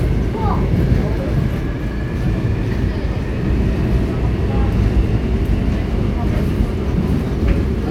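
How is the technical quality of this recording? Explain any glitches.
No glitches can be heard anywhere in the recording, so there is nothing to explain.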